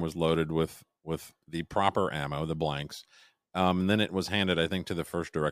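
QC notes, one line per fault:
No faults heard in this speech clip.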